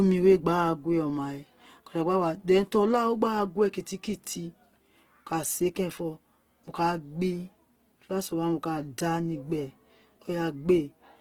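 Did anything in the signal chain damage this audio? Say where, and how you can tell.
Yes. The codec stage is the likely culprit: the speech appears to have passed through Opus compression in its music (CELT) mode, at a rate that fits roughly 16 kbps. Throughout the clip the codec keeps each band's energy but runs short of bits, so it patches bands by folding in lower ones or filling them with noise. The speech therefore sounds plainly rough, grainy and noisy rather than swirly, yet stays fullband, with content reaching about 20.2 kHz.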